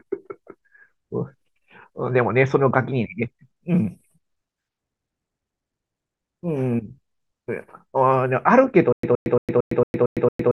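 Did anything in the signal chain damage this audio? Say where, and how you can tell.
Yes: a playback stall, likely, causes stutter with silent gaps from 8.93 s to the end. A 118 ms fragment repeats every 227 ms, with digital silence between.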